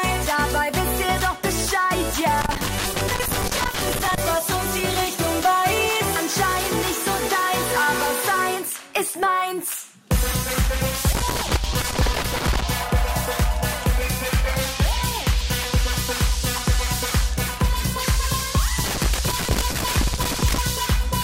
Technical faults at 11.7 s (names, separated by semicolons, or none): loose connector crackle